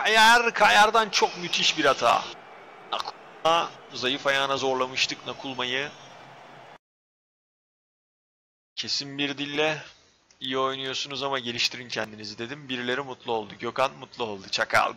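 At 4.58, 9.56, 12.04 and 14.53 s the sound skips forward, dropping around 15 ms each time with the two sides butted together. The spacing follows a 2.5 s grid, so this is likely audio missing between chunks as each block was handed over.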